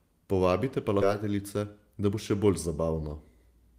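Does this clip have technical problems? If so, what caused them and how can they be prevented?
Yes, there are two. The first is a skip ahead at about 1.01 to 1.03 s: the speech jumps forward with no filler, and roughly seven tenths of a second is simply gone. The two sides are butted together almost directly. What happened is that a chunk got dropped, in transit or when the jitter buffer overflowed, while newer audio was already queued, so playback lurched ahead. Sizing the jitter buffer for the network's real burstiness, so it doesn't overflow and discard queued audio, would prevent it.

The second is a jitter buffer speed-up from about 1.23 to 2.68 s. The speech runs at around 109% speed, so it sounds a bit rushed, though the pitch stays put. The buffer was holding more audio than its target, likely after delayed packets showed up in a clump, so the receiver trimmed out tiny pitch-period slices over and over, removing something like 150 ms in total to catch up. 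Smoothing packet delivery on the network side, or letting the buffer drain more gently, would avoid the audible rush.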